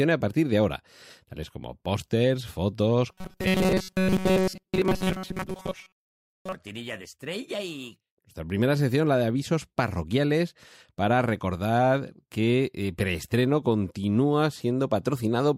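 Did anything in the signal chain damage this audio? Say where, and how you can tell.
Yes, likely a driver or buffer stage starved of input, repeating a short stretch of roughly 5 ms instead of new audio. From 3.12 to 6.55 s, between "tales como pósters fotos" and "de estrella y nuestra", the speech becomes a rigid metallic buzz at 188 Hz, robotic sound from repeated short buffers, with most of the audio in that stretch replaced by repeats.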